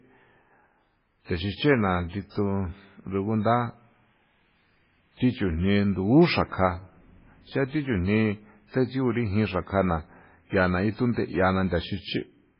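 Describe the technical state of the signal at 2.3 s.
At 2.30 to 2.35 s there is pre-echo: about 57 ms of hiss precedes a sharp attack, because quantisation noise spread across the transform block fills the quiet moment before it. Throughout, nothing sounds above 5.3 kHz and the sound is watery and swirly, likely heavy MP3 compression at a very low bitrate, around 16 kbps.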